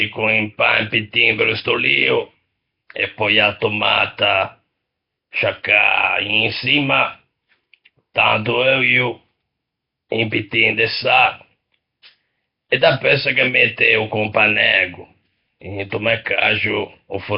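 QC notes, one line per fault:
Throughout, Nellymoser compression: the speech carries a rough, hissy halo and a smeared, underwater quality, with heavy codec damage and nothing above 5.3 kHz. This is likely the Flash-era Nellymoser Asao codec, which works on short blocks at a fixed, very low bit budget, consistent with a rate around 22 kbps. Quieter bands get no bits and are replaced with noise, which produces the hiss and blurs the sound.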